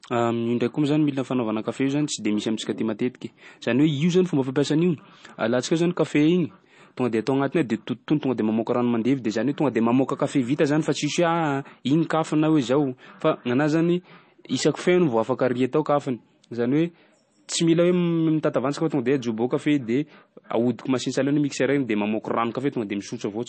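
Heavy MP3 compression is the likely cause here, with the encoder starved of bits across the whole speech recording, a damage level that fits a low bitrate around 32 kbps. To cope, it has cut the treble off at a fixed point, so nothing sounds above about 8.3 kHz, and it drops weak frequency lines that then flicker in and out between frames. The result is plainly audible throughout: a dull, band-limited tone with a watery, swirling texture, chirpy metallic edges on s sounds, and smeared attacks.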